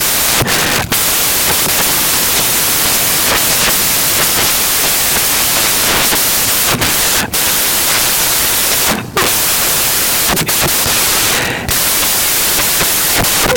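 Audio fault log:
Throughout: samples built from the wrong bytes. The bytes of each speech sample are combined wrongly, so the jittery low bits dominate, giving loud hiss.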